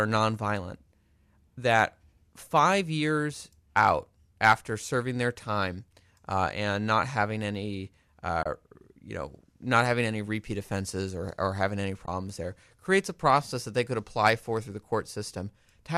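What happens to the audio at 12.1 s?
At 12.06 to 12.08 s, between "or or having any" and "there creates a process", the sound briefly drops out. This is AAC frame loss with muting: the decoder replaced the missing frames' spectrum with zeros, and the overlapping transform windows fade the signal out and back in rather than cutting it. The gap of about 20 ms fits two lost frames of a low-delay codec, likely AAC-ELD, and is heard as a short, soft-edged hole.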